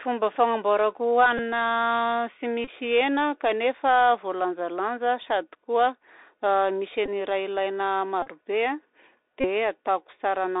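Throughout, the speech has been carried over a Bluetooth CVSD headset codec, a 64 kbps link that codes each sample as a single up-or-down bit with an adapting step. The line band is cut to roughly 300 Hz to 3.7 kHz, so the audio sounds thin and boxy. The codec damage is plainly audible: loud high-frequency sounds outrun the step and rasp, sibilants turn scratchy, and a granular hiss sits under the voice.

At five points a Bluetooth headset packet was repeated. Voice packets between headset and phone were lost, and the chip decoded the previous packet's bits again in their place. Because the repeat cycles every 3.75 ms, each run turns into a short buzz near 267 Hz.

The first comes at 1.38 s and lasts about 11 ms, which points to roughly three packets. The second, from 2.64 to 2.68 s, fills about 26 ms. The third, from 7.06 to 7.10 s just before "ny raha ilaina", lasts about 19 ms. The fourth, from 8.22 to 8.28 s right after "misy ny raha ilaina", is the longest buzz at about 38 ms, suggesting around ten lost packets. 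The last runs from 9.41 to 9.46 s, about 34 ms.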